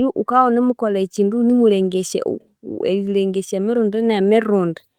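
No technical faults are audible anywhere in this recording.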